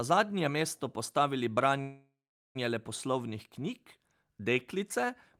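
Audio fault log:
1.81–2.57 s, call audio freeze: packets were likely held up in transit, so the jitter buffer ran dry and the receiver had nothing new to play. It stretched the last sound into a fading buzz or hiss, which gives way to about 0.44 s of silence before the stream resumes exactly where it stopped. Nothing is lost, but the 0.74 s gap pushes everything afterward that much later.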